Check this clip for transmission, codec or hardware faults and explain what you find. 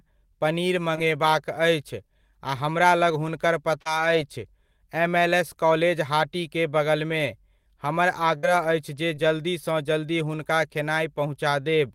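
Three transmission faults occur, all from packets lost on the way to the receiver. Short concealed packet loss appears at 3.81–3.87 s and 9.15–9.19 s. About 40 ms and 20 ms of speech were lost and replaced by an extrapolation of the preceding sound, heard as a brief smear. On a spectrogram the harmonics are briefly frozen. A burst of packet loss at 8.37–8.45 s drops about 60 ms, bridged by a fading continuation, so a held buzz or hiss decays. The waveform shows a dip before the speech resumes with material missing.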